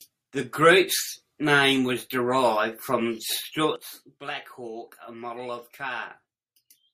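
A gain setting was most likely applied in a single step with no ramp, producing a sudden gain jump at 3.76 s, just after "was derived from the". The speech level falls by about 12 dB from one sample to the next and stays there to the end of the clip. Because the change is applied to the whole signal, the background noise drops by the same amount at the same instant.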